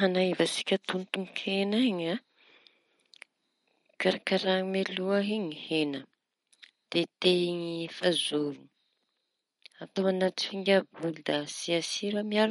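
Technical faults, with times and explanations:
Throughout, likely MP3 compression: nothing sits above 11.2 kHz, consistent with a low bitrate near 48 kbps, so s sounds take on metallic chirps. Weak components flicker between frames, giving watery swirl; a spectrogram shows a hard ceiling and speckled, gappy patches.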